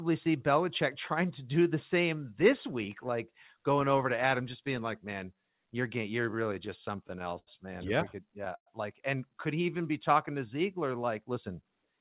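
From 6.24 to 7.49 s the sound hits repeated stalls (stutter): about a dozen brief freezes, the longest 79 ms, where the receiver's jitter buffer ran dry and stretched the last sound until late packets arrived. A shorter burst from 8.25 to 8.68 s has four, one lasting 109 ms. Nothing is lost, but the audio drags and hiccups. On a spectrogram, the filled stretches show smeared, repeated harmonic bands under a 4 kHz ceiling from a narrowband call codec, and the waveform shows short copied cycles fading in the longer gaps.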